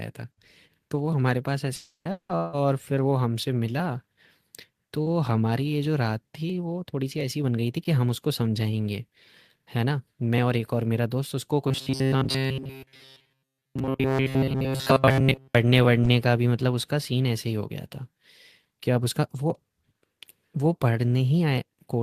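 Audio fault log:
1.75–2.08 s and 2.11–2.32 s, long network dropout: the sound smears into a fading buzz, then drops to near silence (about 120 ms, then 100 ms) before returning with roughly 300 ms and 180 ms missing, likely because packets stopped arriving and the receiver stretched the last sound.
11.68–15.55 s, robotic sound from repeated short buffers: the speech turns into a rigid metallic buzz pinned at 133 Hz, likely because essentially every stretch is a replay of the last short chunk, which fits a buffer of about 7.5 ms repeating while fresh audio is skipped.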